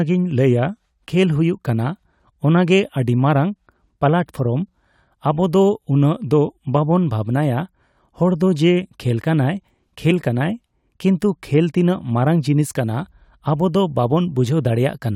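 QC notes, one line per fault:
10.1 s, compressed frames skipped. The speech jumps forward by about 20 ms just before "ᱠᱟᱱᱟᱭ ᱠᱤᱱᱛᱩ". A stretch of encoded frames never reached the output.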